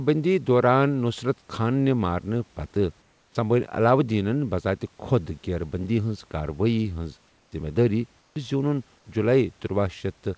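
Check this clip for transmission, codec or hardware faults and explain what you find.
Two transmission faults show up, both tied to discontinuous transmission on a call path whose G.722 coding leaves nothing above 8 kHz.

Comfort noise in place of the background, at 3.02–3.35 s, 7.28–7.52 s and 8.21–8.36 s: the sender likely stopped transmitting during pauses, so the receiver synthesised a steady, featureless hiss. It replaces the real room noise, which sits about 40 dB below the speech. The hiss is about 3 dB quieter in the first two gaps and about 5 dB quieter in the third.

Onset clipped by the voice detector, at 8.34 s: the detector likely reacted late, so about 20 ms of the returning sound was never sent. It starts abruptly out of comfort noise, with no soft beginning.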